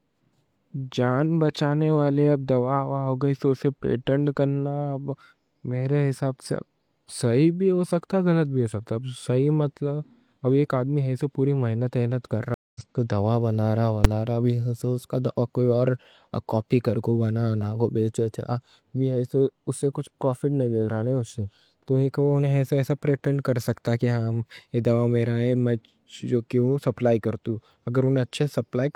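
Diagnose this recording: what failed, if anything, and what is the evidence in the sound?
At the network stage, a stream reconnect breaks the speech at 12.54 s. The sound drops to about 207 ms of silence and picks up at 12.82 s roughly a tenth of a second further on, so a short stretch is lost rather than repeated. The player lost its connection, rejoined the live stream and started a fresh decoder. On a waveform there is a flat gap with a soft ramp back in as the first decoded frame fades in. A spectrogram shows a clean vertical blank band.

At 14.05 s there is a single sharp bang from invalid numbers at full scale. This happened during sample-format conversion, at the end of the floating-point processing chain. A calculation produced infinite or invalid values across a block of about 5.8 ms, which fits a 256-sample block, and conversion pinned every one of those samples at maximum amplitude. 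On the waveform this is a narrow slab held flat at one extreme value, well beyond the speech peaks. On a spectrogram it is a thin, bright, full-height column.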